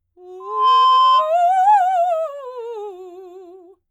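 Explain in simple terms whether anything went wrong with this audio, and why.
A microphone picked up the loudspeaker it was feeding, and the loop kept amplifying one pitch. This loudspeaker feedback squeal appears at 0.40 s as a 1 kHz tone that swells over about a third of a second, sits above the music, and stops at 1.35 s.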